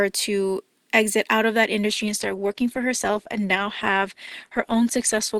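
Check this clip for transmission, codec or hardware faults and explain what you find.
One fault is present: an adaptive stream at a lower bitrate. From 1.90 s to the end, quality drops suddenly without any gap. The stream switched to a leaner encoding, which fits a fall from about 64 to 16 kbit/s Opus. Treble vanishes above 12.1 kHz, and the speech turns duller, with more codec artefacts.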